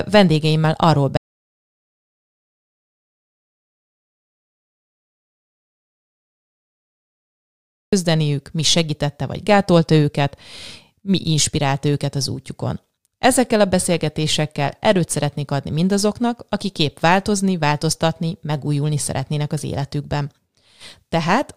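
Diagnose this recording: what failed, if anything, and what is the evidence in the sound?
An audio dropout to silence hits this speech early. After "vendégeimmel arról" at 1.17 s, the signal falls to silence. It stays there until 7.93 s, when it resumes with "mi segítette vagy gátolta". That is about 6.76 s lost. The gap holds no room tone or hiss, only true silence. The stage is the input path. The likely cause is a lost device or link, while the recorder kept writing silence in place of the missing audio.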